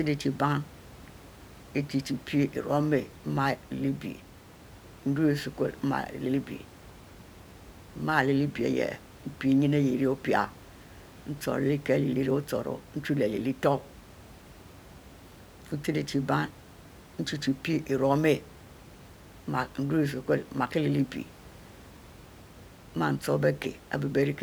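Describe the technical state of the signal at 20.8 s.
At 20.8 s the speech signal is intact, with only the room's own background noise, about 22 dB below the speech, audible beneath it.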